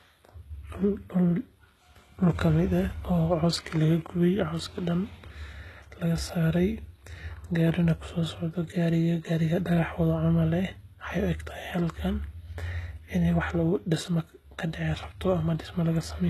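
Across the whole speech clip the treble has a synthetic, gritty edge, and s sounds come out lispy and metallic. This is likely HE-AAC compression at a very low bitrate, which fits roughly 16 kbps. Only the lower spectrum is truly coded, and the upper bands are copied up from below and shaped coarsely, so their harmonics fail to line up. A spectrogram shows smeared, repeated-looking patches above the crossover and nothing above 12.3 kHz.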